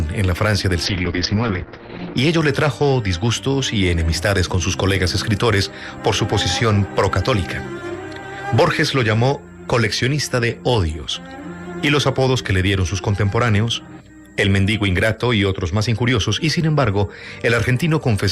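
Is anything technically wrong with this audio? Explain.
Yes. From 0.86 to 2.23 s the sound turns muffled and rough, its top end cut near 6 kHz instead of 20 kHz. This is a call bitrate drop: the encoder, starved of bits, coded coarsely and shed high frequencies, which points to a fall from 64 to 7 kbps.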